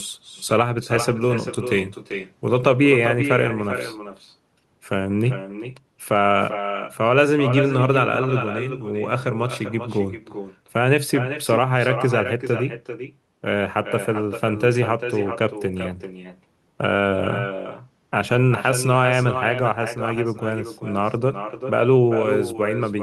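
Speech throughout is shadowed by echo with no canceller: a distinct, thinner copy returns around 400 ms later at about 9 dB down, unlike room reverb's smooth, continuous tail.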